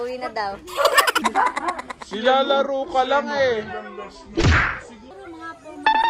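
From 1.22 s to 5.11 s a section at the wrong speed plays back slower than it was captured, likely because that stretch was clocked at a different rate than the rest, running at 0.724 times normal speed. Since timing and pitch are tied together here, the whole passage drags and drops about five semitones, turning deep and sluggish, then snaps back to its proper speed and pitch at 5.11 s.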